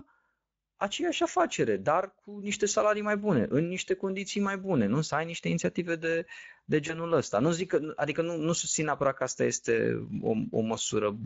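Speech coded throughout with the Speex codec, which sounds plainly hoarse and noisy and has a noise-like upper band, consistent with a middle setting near 16.8 kbps. At 6.87 to 6.99 s, just after "niște inițiative de de", VoIP packet loss concealed by the speech codec produces a brief stretched, fading sound. This points to a single lost 20 ms frame, with the decoder recovering over the following frames.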